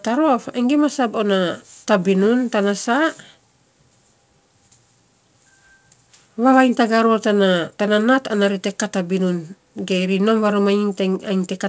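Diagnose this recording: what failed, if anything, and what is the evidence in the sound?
Nothing failed: the speech came over a call path working as intended, with content stopping at 8 kHz in a way that fits a wideband codec such as G.722 at 64 kbps, and nothing else in the sound to flag.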